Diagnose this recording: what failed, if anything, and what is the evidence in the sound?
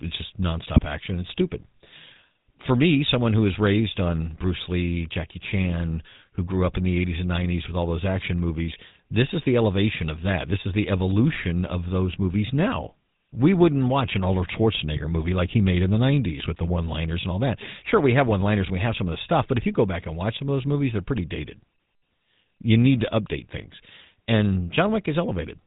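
The speech passes through the GSM full-rate codec at the codec stage, and the damage is plainly audible across the whole clip: a constant buzzy, gravelly roughness and no content above 4 kHz. This fits the 13 kbps full-rate coder. It models the vocal tract and drives it with a sparse, regularly spaced pulse excitation. Band-limited telephone audio sounds dull but clean, whereas this grit lies on every voiced sound and does not come and go.

GSM bit errors on the radio link, at the network stage, add brief bursts of squawk and gargle. These fall at 0.75 to 0.80 s between "it's just" and "action it's stupid", at 14.96 to 15.00 s, at 18.26 to 18.33 s between "we have" and "liners and we have", and at 21.14 to 21.18 s after "of those movies they're". Each burst fits two or three corrupted frames whose filter, pitch or gain values were decoded wrongly. Packet loss would leave gaps or smoothed-over silence, while these bursts produce distorted noise.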